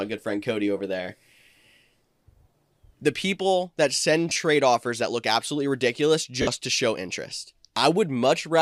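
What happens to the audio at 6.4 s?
Bluetooth LE Audio frames were lost from 6.42 to 6.47 s, just after "that look absolutely ridiculous" and before "to show interest". The LC3 decoder covered the 52.5 ms gap by repeating the last spectrum with random signs, so the sound briefly turns into a noisy smear.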